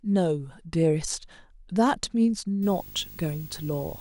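A speech clip. From 2.62 s to the end, video or display buzz intrudes: a 50 Hz field-rate buzz with hash, plus a thin 15.6 kHz line tone. It sits about 20 dB below the speech.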